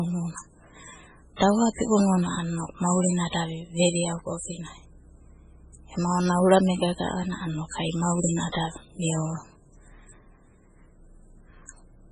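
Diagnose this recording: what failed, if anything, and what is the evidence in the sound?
The failure sits at the codec stage, and the likely cause is heavy MP3 compression throughout the speech. Nothing survives above 10.4 kHz, and the remaining sound is watery and swirling, with chirpy, metallic s sounds and softened consonant attacks, which points to a very low bitrate of around 16 kbps. The encoder cut the treble and dropped weak frequency lines that flicker frame to frame. A plain low-pass filter would dull the top but would not swirl.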